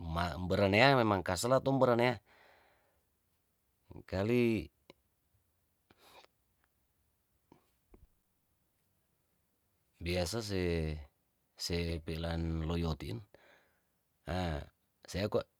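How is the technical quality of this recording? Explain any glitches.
No technical faults can be heard anywhere in it.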